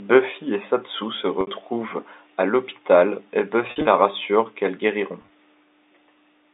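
At 1.41 to 1.47 s, 3.67 to 3.87 s and 5.22 to 5.30 s there is packet loss with pitch repetition. The receiver loops the last pitch period over each gap. The first, a 60 ms gap, fades into silence before speech returns; the later two, made of shorter runs, sound like a brief, buzzy held tone. The middle one stutters across 200 ms.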